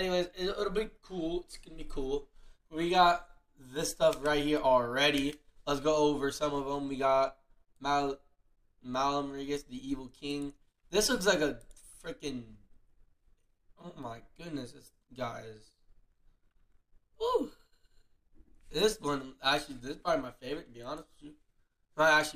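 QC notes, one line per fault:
No faults to note.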